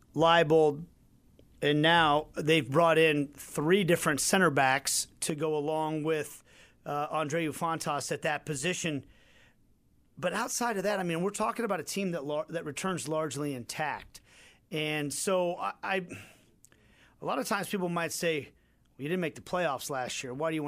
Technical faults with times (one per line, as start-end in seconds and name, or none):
5.30-20.67 one channel drops out